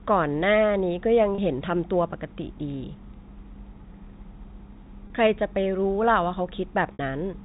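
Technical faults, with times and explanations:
1.35–1.38 s, 5.07–5.10 s, 6.93–6.99 s: packet loss with pitch repetition. The first two gaps are each about 30 ms, which fits a single lost packet, and the third is 60 ms, consistent with two in a row. The receiver bridges each hole by repeating the last pitch cycle it received, so the sound briefly freezes into a held, slightly buzzy tone over the narrow G.711 telephone band. The longer 60 ms gap holds longer and starts fading before the speech returns.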